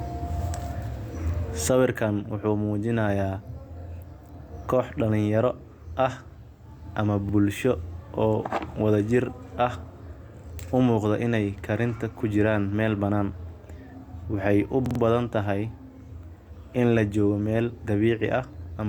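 At 7.29–7.34 s and 10.68–10.73 s, just before "umuqda inaay", a repeated buffer replays one 46 ms slice of speech as a quick stutter. At 14.86–15.0 s it plays three extra times. The stalls fit a 2048-sample buffer and show as identical waveform blocks with hard vertical seams on the spectrogram.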